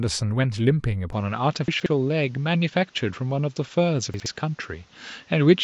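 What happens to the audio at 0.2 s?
Nothing goes wrong at 0.2 s; the speech there plays through cleanly, with no dropout, click, distortion or other fault.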